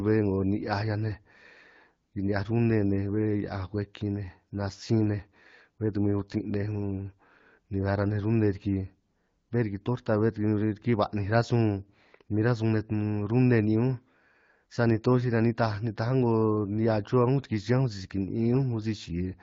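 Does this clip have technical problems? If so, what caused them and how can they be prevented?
No, the speech shows only the light, band-limited colouring typical of AMR wideband (HD Voice) coding at a rate consistent with about 12.65 kbit/s, with no technical problem to trace or prevent.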